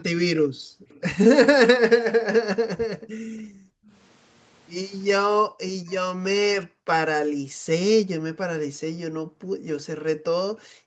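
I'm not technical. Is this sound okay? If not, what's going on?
No. This is speech from a call, and it has two problems.

The first is speech suppressed in double talk. The voice dips deeply or drops out in pieces from 0.0 to 1.03 s, 2.66 to 3.93 s, 5.47 to 6.88 s, 7.28 to 7.67 s, and from 8.01 s to the end. Both sides were likely talking at once. The call's echo remover then turned everything down.

The second is echo leak. At 0.89 to 1.01 s and 5.89 to 5.94 s, a faint, brief copy of the voice comes back about 0.38 s late. This is likely loudspeaker sound that the microphone picked up and the call failed to remove.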